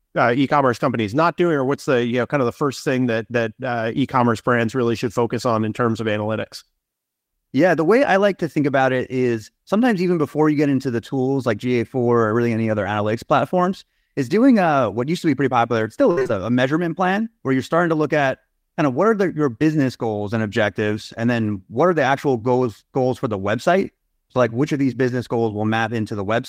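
At 1.85 to 1.89 s, between "not doing or what's" and "you know kind of", a short concealed packet loss occurs: about 20 ms of audio arrived too late to decode, and the receiver extended the preceding sound before blending back, leaving a brief smear.

From 16.11 to 16.31 s, after "pretty popular it still" and before "a a measurement plan", repeated packet loss produces robotic sound. Four gaps, the longest 56 ms, each get patched from the last audio, so about 59% of that stretch is synthetic and choppy.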